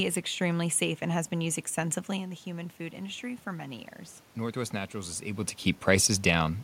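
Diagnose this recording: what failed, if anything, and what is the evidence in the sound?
Call processing is where this happens: automatic gain rising. Just after "and has been used" the input drops about 11 dB as the talker moves away around 2 s. From 2.12 to 5.53 s the AGC slowly adds about 3 dB, so the voice and the room noise swell together.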